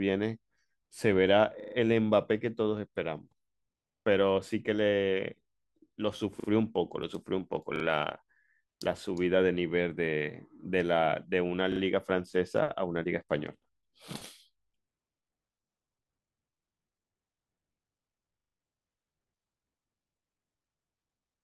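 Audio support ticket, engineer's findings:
Repeated buffer stutter at 1.6 to 1.76 s, then 6.4, 7.76 and 11.72 s. Same segment replays with hard joins: four extra times first, twice after. Repeat length fits a 40 ms buffer. Playback underrun likely. Speech resumes without apparent loss.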